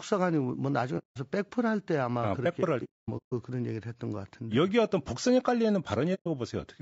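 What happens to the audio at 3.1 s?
AAC frames were lost between 2.84 and 3.33 s, and the decoder muted them: about 390 ms of holes spread over 480 ms, the longest near 200 ms, fading softly. Throughout, the speech sounds rough and grainy, with noise between harmonics, likely from low-delay AAC compression (AAC-ELD) at around 32 kbps.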